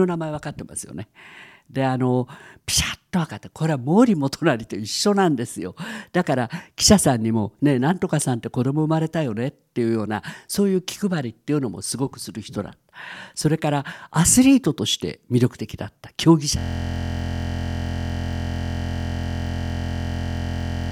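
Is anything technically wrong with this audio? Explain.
Yes. From 16.59 s to the end, the speech gives way to a steady buzz at about 43.1 Hz, a 23.22 ms scrap of audio repeating close to two hundred times. This is a system hang loop: the system froze while the sound hardware kept replaying one buffer, which fits a 1024-sample buffer.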